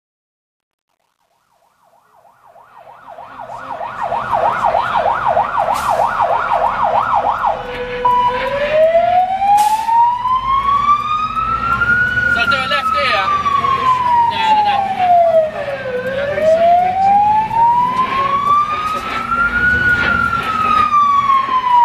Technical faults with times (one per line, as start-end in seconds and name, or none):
0.00-4.44 truncation distortion on a fade